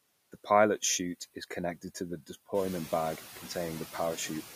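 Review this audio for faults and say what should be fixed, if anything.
Noise suppressor artifacts run through the whole speech clip. The suppressor works frame by frame. It judges which frequency bands hold steady noise and pulls them down, here by about 14 dB. So the background drops in the gaps and comes back under the speech. That pumping is the fault. Around two and a half seconds the room noise rises by about 11 dB. It still sits about 14 dB below the speech. Prevent it by easing the suppression depth or smoothing its gain changes between frames.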